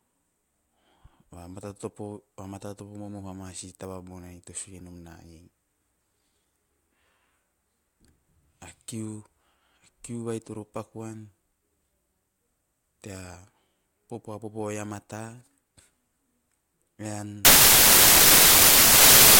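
Samples built from the wrong bytes take over from 17.45 s to the end. The bytes making up each sample are combined in the wrong order or alignment, so the fast-changing low bits become the large part of each value. The speech turns into loud, harsh broadband noise.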